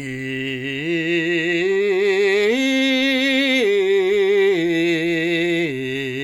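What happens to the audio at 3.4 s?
Nothing goes wrong at 3.4 s: the music plays through that moment intact, with no dropout, click or other fault.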